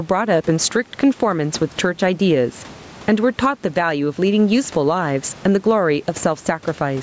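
Gain pumping runs through the whole speech recording. The gain swing is roughly 15 dB. Loud and quiet passages sit close together, and the sound feels squashed. The likely cause is input gain set far too high, with a fast limiter or compressor pulling it down on each peak. There is also room noise, about 32 dB below the speech.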